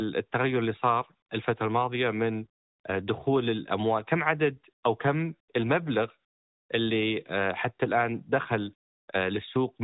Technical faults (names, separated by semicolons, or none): none